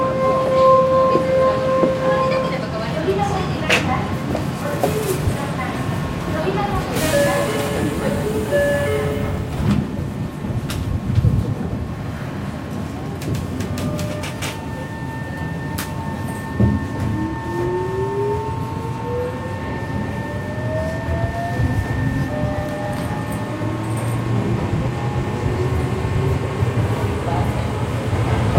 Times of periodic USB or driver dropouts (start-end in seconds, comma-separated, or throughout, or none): 0.37-28.36